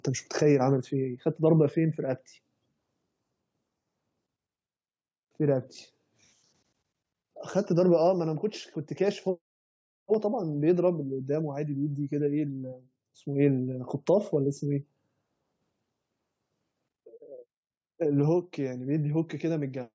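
Speech heard through a call's microphone processing, with its bass trimmed and nothing above 8 kHz, shows no technical faults.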